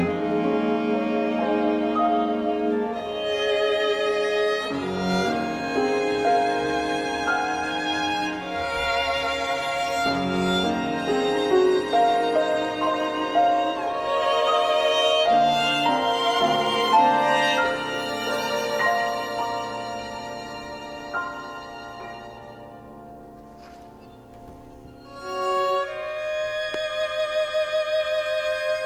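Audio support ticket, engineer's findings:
Loud pop, single, 26.74–26.76 s, roughly 10 dB above programme. Likely cause: voltage transient from plug, switch, static or driver glitch, shaped by downstream circuitry. Unlike a dropout, audio continues beneath it; unlike buffer clicks, no repetition.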